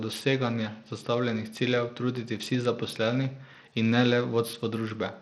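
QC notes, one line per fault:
Throughout, likely Bluetooth SBC compression: treble flickers out of the speech under gritty noise and aliasing, as a bit budget fitting 80 kbps starves the upper sub-bands.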